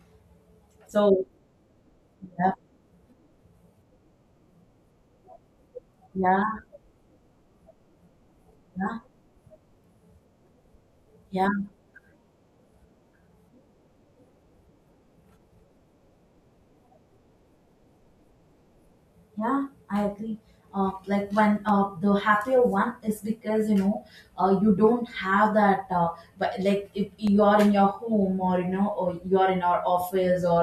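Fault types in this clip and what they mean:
Block of digital silence: a short run of samples dropped to silence, most plausibly because the output buffer was not refilled in time, so the speech cuts out and resumes with no fade. In this clip it happens twice, at 21.69 s and at 27.27 s just before "you are in your". Each gap lasts 0.67 ms, which fits a 32-sample block. At that length there is no audible hole, only a tick or dip.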